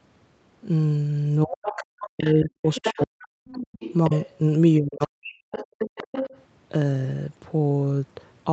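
From 1.44 to 3.4 s, speech is suppressed in double talk. The voice dips up to about 40 dB in pieces, likely because the echo canceller turned down both talkers. The other side's voice leaks through as scraps at 1.65, 2.02 and 2.25 s. It is louder from 2.66 to 3.06 s and longer from 3.48 to 4.37 s, likely echo the canceller missed. From 4.78 to 5.52 s, the speech is suppressed again. The leaked voice then returns from 5.52 to 6.42 s.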